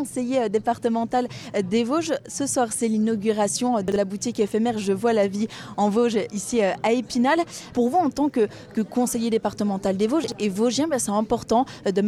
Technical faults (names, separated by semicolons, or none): chunks out of order